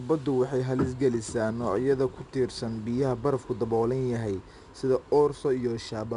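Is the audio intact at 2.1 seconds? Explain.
No. At 2.1 seconds, as across the whole clip, the speech carries 4-bit ADPCM compression. Each sample is coded as a coarse 4-bit step from a predicted value, so a gritty hiss rides on every loud syllable and sharp onsets sound roughened. Nothing exists above 10.7 kHz, which points to a sample rate near 22 kHz. A spectrogram shows a hard ceiling there and a level-following noise haze between harmonics. The waveform looks jagged on attacks.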